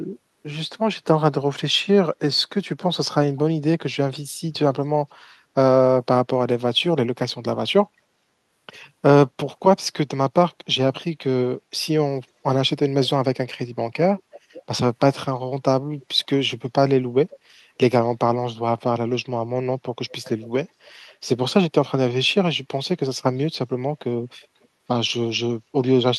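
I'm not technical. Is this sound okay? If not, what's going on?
No. There is echo leak at 14.33 to 14.62 s, 17.3 to 17.38 s, 20.1 to 20.48 s, 21.08 to 21.15 s and 24.42 to 24.67 s: faint repeats of the speech arriving about half a second late, getting quieter over time. The likely cause is one caller using a loudspeaker. Their microphone caught the call playing back, and the echo-removal feature missed some of it, so brief pieces bounced back down the line.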